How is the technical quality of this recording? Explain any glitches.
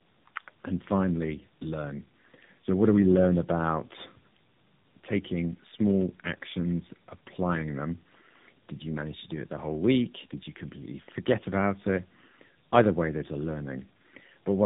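The recording is degraded throughout by one fault. Tandem speech coding runs the whole clip: the speech passed through two low-bitrate speech codecs in a row, likely G.729A and then AMR-NB, the second re-encoding the first's damaged output. The result sounds rough, muffled and warbly, with nothing above 3.8 kHz.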